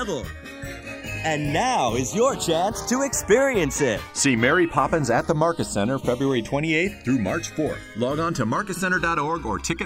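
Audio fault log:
Throughout: channels drifting apart. The two channels run on slightly mismatched clocks, with an offset of roughly 150 ppm, so the delay between them slides to about 1 ms. In mono the comb notches sweep, giving a slow flanging.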